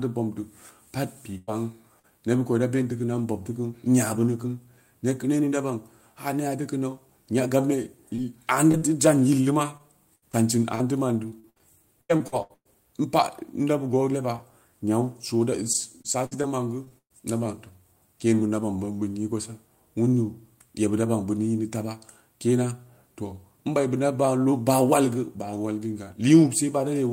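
Speech clip with three kinds of packet-loss fault. A burst of packet loss at 1.37–1.49 s drops about 100 ms: the last sound is held and faded as a buzz or hiss, then speech resumes further on, longer and emptier than a tick. Short concealed packet loss at 1.99, 8.15, 8.72 and 8.78 s leaves only 20–40 ms smears or wobbles. Repeated packet loss (robotic sound) from 9.77 to 12.67 s and 15.73 to 17.12 s patches about a fifth of each stretch, with holes up to about 115 ms, giving choppy speech with pieces missing instead of one isolated dropout.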